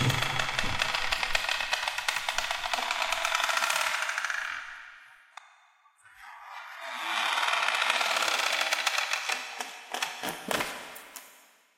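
This clip of everyday sounds has one fault, an adaptive stream at a lower bitrate. From 5.97 s to 7.97 s the quality drops suddenly, with no gap. Codec artefacts rise, and nothing is heard above 12.3 kHz. The stream seems to have switched down when the connection slowed. The sound points to a change from roughly 96 kbit/s AAC to a 16 kbit/s HE-AAC version. After two seconds it switches back up.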